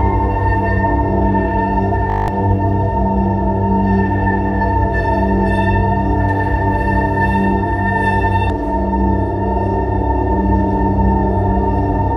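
From 2.1 to 2.28 s the audio freezes into a system hang loop: one 20 ms slice repeats nine times, giving a steady 50 Hz buzz and losing about a fifth of a second of sound. Exact repetition, not silence, separates it from a dropout.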